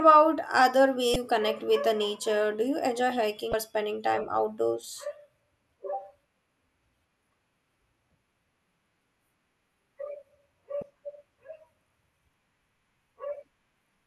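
Speech clip with three short bursts of damaged data in a compressed stream: 1.13–1.16 s, just before "connect with the nature"; 3.50–3.54 s, between "you enjoy" and "spending time outdoors"; and 10.79–10.83 s. Corrupted frames are misread while the decoder loses and regains sync.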